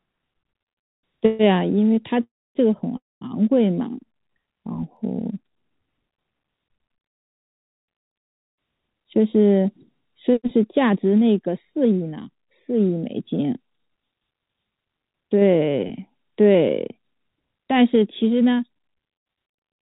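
Call audio freezes at 1.26–1.41 s, 2.23–2.57 s and 2.97–3.23 s stretch the last sound into a fading buzz. The second and third decay into roughly a quarter second of silence before the speech resumes intact. The likely cause is delayed packets draining the jitter buffer.

Overlapping chunks produce a brief stutter at 4.97 s, where 13 ms replays at a join between processing chunks, consistent with 5 s blocks.

Jitter buffer speed-ups at 9.06–9.80 s (108%), 10.30–12.36 s (107%), 13.72–15.37 s (112%) and 17.40–18.91 s (108%) trim pitch periods to shed excess delay. Speech sounds hurried at unchanged pitch, against the telephone band that stops at 4 kHz throughout.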